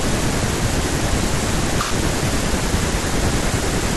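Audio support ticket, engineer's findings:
No faults found on listening; speech reproduces without any audible disturbance attributable to the playback chain.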